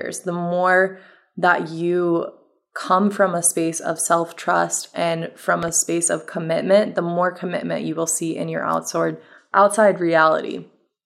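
A sudden voltage step, most likely from a plug, a switch, a static discharge or a driver glitch, entered the signal path between 5.63 and 5.70 s. The circuits downstream shaped that pulse into a loud pop. Here it lands as two sharp pops in quick succession, peaking roughly 5 dB above the speech. The speech continues underneath without a break, so the two pops sit on top of it.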